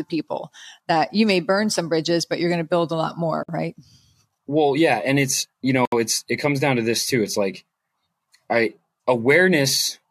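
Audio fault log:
3.43–3.49 s and 5.85–5.92 s, gap at a join of encoded pieces: the speech drops out for 54 ms and then 69 ms, with smeared edges, then resumes where it stopped. Separately encoded segments were joined with encoder start delay and last-frame padding left in.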